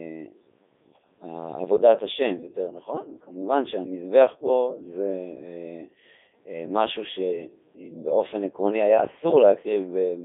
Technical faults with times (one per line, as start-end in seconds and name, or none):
0.00-10.24 Codec 2 vocoder